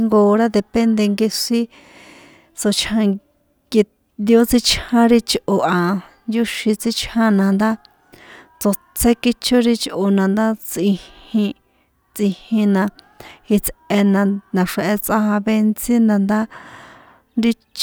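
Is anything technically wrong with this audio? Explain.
No, nothing technically wrong can be heard here.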